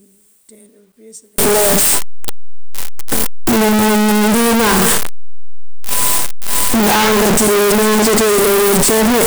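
From 1.38 s to the end, the speech turns into loud, harsh distortion in which soft sounds are as loud as strong ones. The likely cause is signed and unsigned mixed up in the 8-bit samples, so every zero crossing leaps across the full range. The waveform shows a solid block of large swings, and the spectrogram fills with broadband energy.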